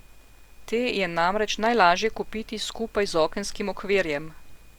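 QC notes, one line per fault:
Nothing stood out on listening to this speech recording.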